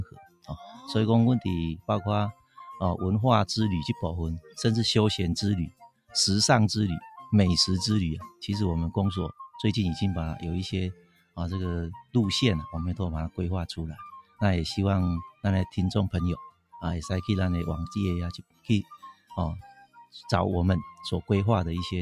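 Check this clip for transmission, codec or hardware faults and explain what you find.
The clip has no transmission or codec fault, but a speech noise suppressor was left running on it. This causes one continuous fault and eight deeper dips.

Noise suppressor applied to music or sounds, throughout: the suppressor treats sustained, steady content as background noise and keeps pulling it down. The level swings by around 10 dB, so held sounds and tails pump and thin while onsets stay intact. Unlike a compressor, the gain tracks how steady the sound is, not how loud.

Sound cut by the noise suppressor, at 0.05–0.5, 2.33–2.57, 5.7–6.14, 10.94–11.38, 14.22–14.41, 16.5–16.76, 18.4–19.32 and 19.68–20.14 s: here the suppressor misjudges a stretch as noise and drops it by about 16 to 21 dB. The decays sink or vanish abruptly. These are smooth gain dips with the sound still faintly present, not hard dropouts to silence.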